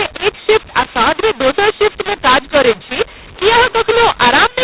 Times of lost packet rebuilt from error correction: none

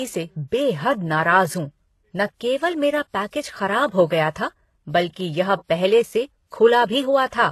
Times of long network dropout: none

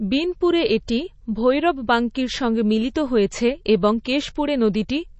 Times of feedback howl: none

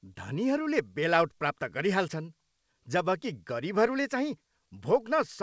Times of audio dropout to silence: none

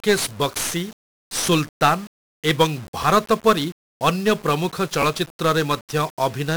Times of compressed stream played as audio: none

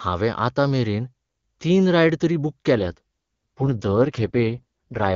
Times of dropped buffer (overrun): none

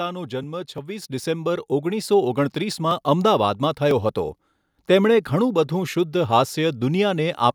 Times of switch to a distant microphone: none

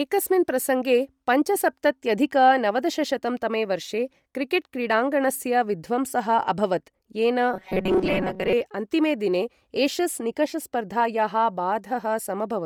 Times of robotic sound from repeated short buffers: 7.54-8.53

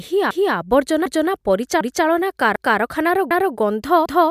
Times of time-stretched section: none

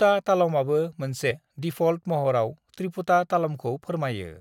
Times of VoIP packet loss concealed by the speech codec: none

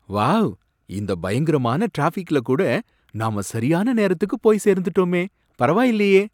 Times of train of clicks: none

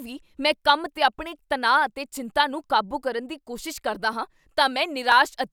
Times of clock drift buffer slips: 0.97-5.12

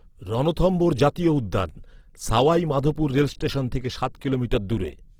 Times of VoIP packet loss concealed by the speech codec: none

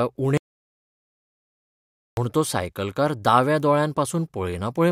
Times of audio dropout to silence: 0.37-2.17

